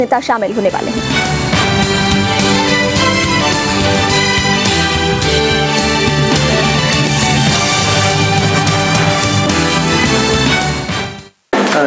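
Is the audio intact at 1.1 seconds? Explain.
No. At 1.1 seconds the clip has gain pumping, present throughout. The gain swings by around 20 dB, pulled down on each loud sound, squashing the dynamics; the likely cause is excessive input gain with a fast limiter pulling it down on peaks. The call processing's 8 kHz band limit is normal.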